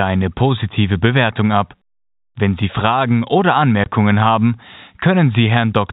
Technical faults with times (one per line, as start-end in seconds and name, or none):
3.84-3.86 packet loss filled with silence